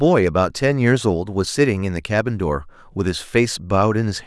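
No technical fault can be heard anywhere in the speech recording.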